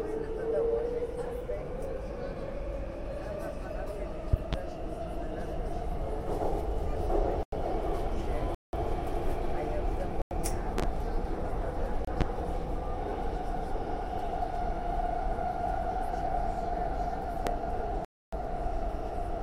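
A recording of sounds, marred by loud pops: sharp thumps about 20 dB above the sound, doubled at 4.33 s and 10.78 s and single at 12.21 s and 17.47 s, likely from electrical voltage pulses such as switch or static discharges. It also has blocks of digital silence, abrupt dropouts at 7.43 s (93 ms), 8.55 s (186 ms), 10.22 s (93 ms), 12.05 s (28 ms) and 18.05 s (279 ms), probably where the output buffer went unfilled in time and was zeroed; the 93 and 186 ms holes fit buffers of 4096 and 8192 samples.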